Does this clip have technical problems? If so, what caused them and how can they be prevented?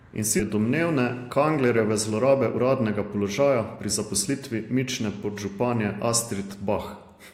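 Yes. At 0.39 s there is a skip ahead: the receiver threw away a stretch of audio, either lost in transit or discarded when the jitter buffer overflowed, because later speech was already queued. Roughly 0.7 s of speech is missing, and nothing fills the gap, so the sound on either side of the cut is butted straight together and the talker seems to jump forward abruptly. Sizing the jitter buffer to absorb bursts, and discarding in small concealed steps rather than one large chunk, would prevent this.

From 2.11 s to 5.45 s there is a jitter buffer speed-up. The buffer was holding more audio than its target, so to bring the delay back down the receiver repeatedly cut out short slices about one or a few pitch periods long. Together these removals take away roughly a third of a second, and the speech plays at about 110% speed with its pitch unchanged, sounding hurried. Smoother network delivery, or a gentler and more gradual drain rate in the adaptive buffer, would prevent it.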